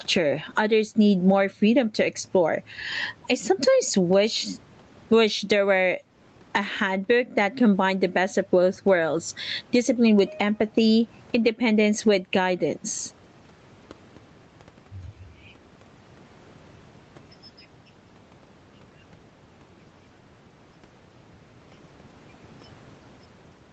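Speech, recorded through call microphone processing, with nothing above 8 kHz. Gain pumping runs through the whole clip. The swing is roughly 15 dB. Loud and soft passages sit close together, so the sound feels squashed. The likely cause is microphone gain set far too high, with a fast limiter pulling it down on every peak. The room noise sits about 43 dB below the speech.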